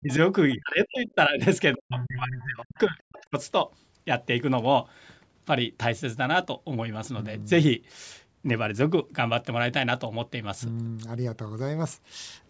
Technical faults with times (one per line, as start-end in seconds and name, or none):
0.00-0.10 speech suppressed in double talk
0.09-0.14 other side's voice leaking through
0.51-0.56 other side's voice leaking through
0.55-1.41 speech suppressed in double talk
1.75-3.35 speech suppressed in double talk